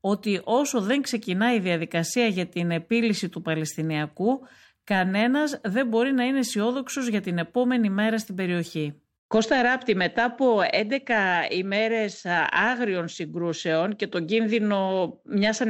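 A speech recording with no technical faults to report.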